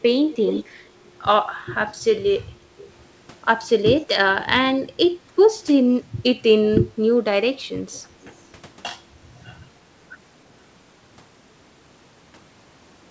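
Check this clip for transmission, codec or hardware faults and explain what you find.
The clip has one fault type: an echo leak, heard three times. A delayed copy of the speech comes back at 0.30 to 0.64 s, again at 2.77 to 2.89 s, and briefly at 7.92 to 8.00 s. Each copy trails its source by about 0.3 s. The likely cause is a far-end loudspeaker whose echo canceller let part of the microphone pickup through and returned it. The first scrap is the clearest, roughly 10 dB under the speech, while the later two sit far lower, near 25 and 30 dB down. Unlike room reverberation, which smears into a continuous tail, this is a discrete repeat at a fixed lag. The band ending at 8 kHz fits a wideband call codec such as G.722.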